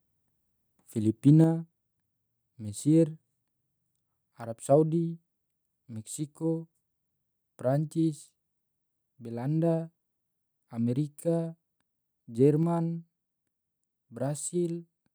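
From 1.28 to 1.30 s the loudest speech peaks flatten at the clipping limit with a brief harsh crackle, likely microphone overload where input gain drove a small share of samples into the converter's limit. At 1.44 s speech and background drop abruptly by about 4 dB together, consistent with a microphone volume stepped down by the call software reacting to that clipped peak.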